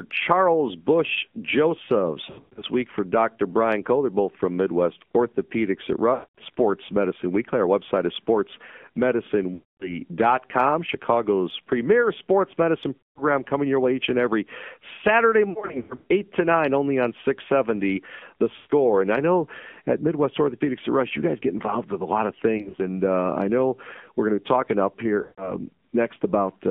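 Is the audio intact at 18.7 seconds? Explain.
No. From 18.56 to 18.72 s, lost AMR speech frames: about 140 ms, which fits seven 20 ms frames failing their checks. The decoder keeps replaying the last pitch and vocal-tract settings at falling gain, so the sound smears and fades rather than cutting to abrupt silence as a plain dropout would. Beneath this, the AMR narrowband mobile codec holds the band between 200 Hz and 3.5 kHz, with the plainly buzzy, synthetic texture that fits a low mode near 7.4 kbps. Unlike simple low-pass filtering, this also roughens the remaining sound.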